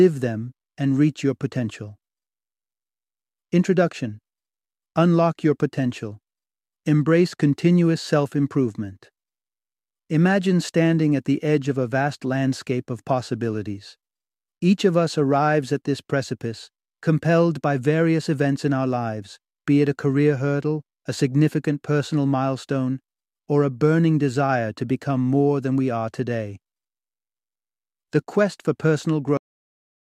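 The final buffers of this speech recording were never written, a cut-off end at 29.37 s, so the sound stops mid-utterance and drops straight to digital silence without any decay.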